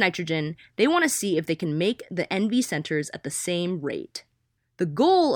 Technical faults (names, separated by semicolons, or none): none